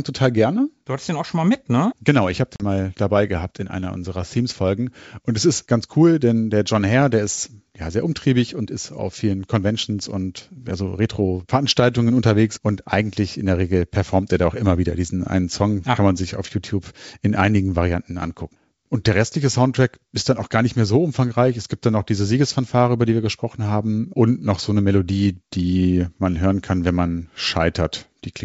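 At 2.56 s, after "ich habe", packet loss on an ADPCM call cuts a hard-edged silent gap of about 40 ms, fitting roughly two lost G.722 packets. The decoder's predictor and step size drift from the sender's, so sound resumes with brief, slight distortion, settling by 2.63 s before "mal dabei gehabt in".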